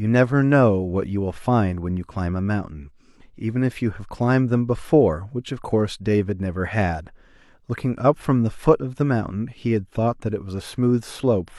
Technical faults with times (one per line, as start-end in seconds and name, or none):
none